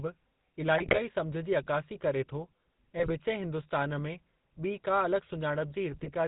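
From start to finish the speech has a buzzy, gravelly roughness and nothing above about 4 kHz. This is GSM full-rate codec damage, which fits a 13 kbps full-rate coder. It rebuilds the voice from a vocal-tract model driven by sparse, regularly spaced pulses.

Three bursts of squawking and gargling cut through at 0.78 to 1.0 s, at 2.98 to 3.13 s and at 5.92 to 6.09 s. These are GSM bit errors: corrupted filter, pitch and gain values reach the decoder, bending the spectrum and spiking the level for a few frames.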